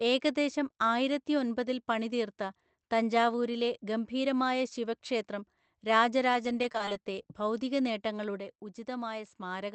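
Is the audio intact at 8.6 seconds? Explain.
No. At 8.6 seconds the speech is in the middle of a sudden level drop of about 6 dB that begins at 8.40 s and lasts to the end of the clip. The sound steps down abruptly rather than fading. This is likely one channel dropping out: with one side of the stereo pair gone, the mono sum keeps only half of what both channels shared, and anything carried solely by the lost channel vanishes.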